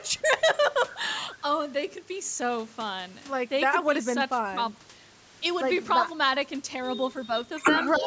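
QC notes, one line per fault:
7.98–8.07 s, speech suppressed in double talk: right at the tail the speech dips by about 10 dB for roughly a tenth of a second, likely the echo canceller mistaking the overlap for loudspeaker echo and pulling the near talker down with it.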